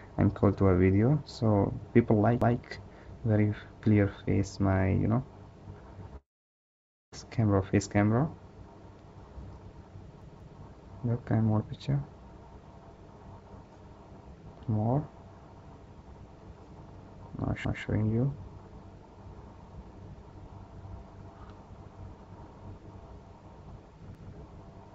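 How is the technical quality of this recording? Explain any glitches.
The recording has two kinds of glitch: four stutters and one longer gap. It arrives over a call path whose G.722 codec leaves nothing above 8 kHz.

At 2.42–2.60, 10.22–10.59, 17.65–17.83 and 24.15–24.33 s, a repeated buffer occurs. A roughly 186 ms chunk, which fits an 8192-sample buffer, plays again because new audio arrived late. It repeats twice at 10.22 s, so it sounds three times. These are exact repeats with hard joins, and nothing is lost.

From 6.16 to 7.14 s there is a long network dropout, likely caused by the network. About 0.96 s of audio is lost: a fading buzz, then near-silence. Unlike a stutter, the sound skips ahead afterward.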